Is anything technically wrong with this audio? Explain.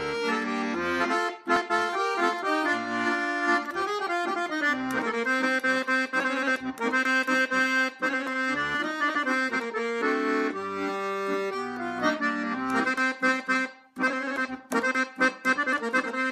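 No, nothing is technically wrong with this audio.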